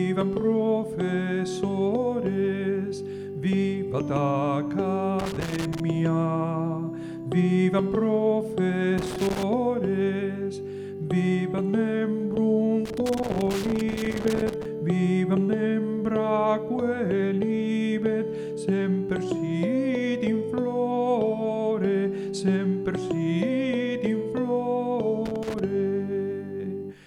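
Loose connector crackle breaks out at 5.19 to 5.80 s, 8.98 to 9.43 s, 12.85 to 14.65 s and 25.25 to 25.59 s. A worn contact keeps making and breaking, chopping the signal into irregular bursts of scratchy crackle, longest in the 1.8 s run.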